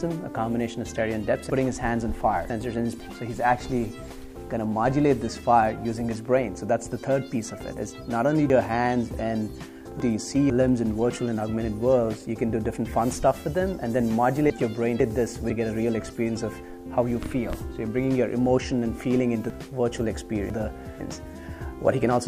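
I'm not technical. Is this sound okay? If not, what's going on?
No. The sound has a problem called chunks out of order. It happens four times: from 1.5 to 3.0 s, 8.5 to 10.5 s, 14.5 to 15.5 s, and 19.5 to 21.0 s. Each time, a half-second piece of audio plays too late. It comes after the pieces that should follow it, by one to three pieces. Nothing goes missing. But those moments sound jumbled.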